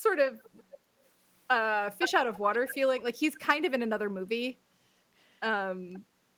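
Echo leak occurs at 0.26–0.77, 2.0–2.11, 2.34–2.39, 2.67–2.75 and 5.93–5.99 s. A copy of the speech, delayed about 0.52 s, returns in short scraps. It is loudest near 2.0 s and quietest at 5.93 s, likely because a loudspeaker-side echo canceller passes residue.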